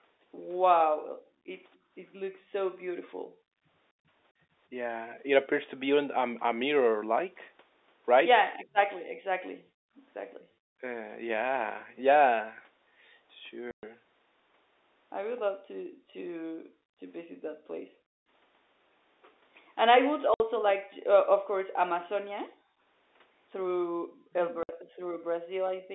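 From 1.03 to 4.4 s the background is gated by the echo canceller. While the loudspeaker plays, the canceller clamps the microphone, so the room tone falls by about 40 dB in short dips totalling roughly a second and a half, then returns when it releases. On a waveform the low noise floor between phrases collapses to a flat line. On a spectrogram the faint broadband haze blanks out in vertical strips, band-limited like the rest of this telephone-line audio.

At 1.75 to 1.79 s a very faint echo leak surfaces: a copy of earlier sound arriving 259 ms late and far below the speech, likely what the loudspeaker side's canceller failed to remove from its microphone pickup. It is too weak to stand out on the waveform. On a spectrogram it is a thin, smeared ghost of earlier harmonic traces.

Between 8.55 and 10.57 s the speech is suppressed in double talk, likely because both ends spoke at once and the canceller, unable to tell its own talker from the loudspeaker echo, ducked everything. 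The voice drops deeply in pieces adding up to about half a second. The waveform envelope shows sudden notches. On a spectrogram the harmonics thin out or vanish, highs first. Inside this stretch, from 9.05 to 9.17 s, the background is gated again for about a tenth of a second.

From 13.71 to 13.83 s comes packet loss filled with silence: 120 ms of dead air with hard edges, which fits 30 ms packets. The waveform drops abruptly to silence, and the spectrogram shows a sharp empty column with hard vertical edges.

From 15.58 s to the end the background is gated repeatedly, about two seconds in all. Within that, speech suppressed in double talk cuts in briefly at 16.52 to 16.6 s. A 60 ms silent gap follows at 20.34 to 20.40 s. Double-talk suppression returns from 24.24 to 25.27 s, about 0.3 s of deep drops, and another 60 ms silent hole falls inside it at 24.63 to 24.69 s.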